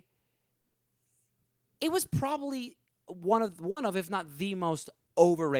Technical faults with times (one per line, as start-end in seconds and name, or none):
0.61-0.76 burst of packet loss
3.70-3.78 burst of packet loss